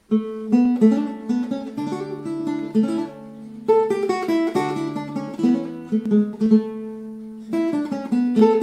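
From 0.66 to 8.39 s, about ten regular clicks recur every 0.97 s, likely clock drift buffer slips dropping or repeating a few samples each.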